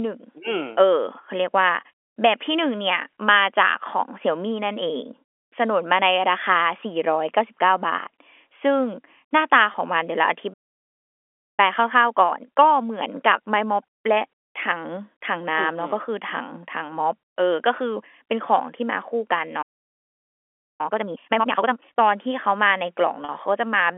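At 9.72 to 9.74 s the speech briefly holds on a slightly buzzy tone. This is packet loss with pitch repetition: about 20 ms of audio, consistent with one lost packet, was bridged by repeating the last pitch period. The same happens at 23.25 to 23.29 s over about 40 ms, which points to two packets.

From 10.53 to 11.60 s the sound cuts out mid-flow for about 1.05 s, a playback stall, likely from the player running short of data. The time-compressed catch-up follows from 11.60 to 14.60 s: the speech is hurried at 1.15 times normal speed with unchanged pitch, as small pieces are cut and cross-faded.

A second stall silences the audio from 19.62 to 20.81 s, about 1.17 s. Its catch-up runs from 20.81 to 21.97 s at twice normal speed, which makes it audibly rushed.

The whole clip sits in the narrow G.711 telephone band.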